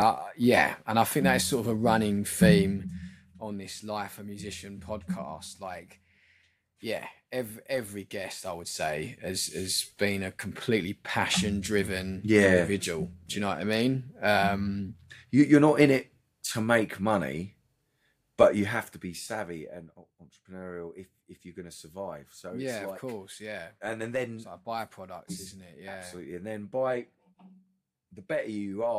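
Nothing is technically wrong with this clip.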